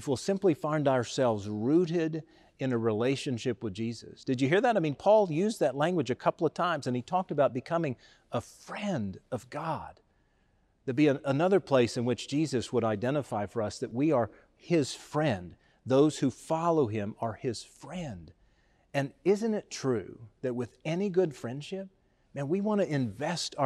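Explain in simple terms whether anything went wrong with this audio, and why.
At 13.91 s the speech jumps ahead, a tiny sliver of sound missing. This is likely a dropped buffer (overrun): the recorder fetched samples too late.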